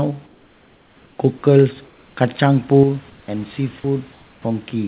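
Comfort noise in place of the background, 0.26 to 1.18 s and 1.86 to 2.16 s: the real room noise, about 35 dB below the speech, turns into a flat, featureless hiss about 2 to 3 dB quieter. This is likely because the sender stopped transmitting during the pause and the receiver synthesised filler.

One channel drops out at 2.83 s and stays lost to the end. The summed level falls abruptly by about 6 dB, likely because one stereo channel vanished.

The same comfort noise returns from 3.10 to 3.28 s, about 2 dB down.

Sound dropped by the voice detector, 3.80 to 3.84 s: about 20 ms of speech gives way to steady synthetic noise, likely because the detector mistook quiet sound for background.

Comfort noise appears once more from 4.12 to 4.44 s. Throughout, nothing is heard above 4 kHz, which fits a narrowband call codec.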